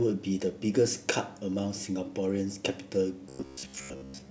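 Robotic sound from repeated short buffers affects the speech from 3.29 s to the end: a rigid 67 Hz buzz, likely a repeating buffer of about 15 ms covering mostly skipped audio.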